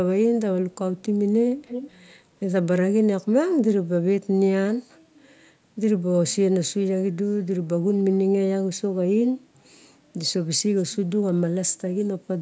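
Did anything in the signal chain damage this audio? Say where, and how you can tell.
Yes: an echo leak in call processing. A 254 ms delayed copy is faint at 0.71–0.77 and 0.97–1.03 s and strong at 1.56–1.99 s, likely from an incomplete echo canceller.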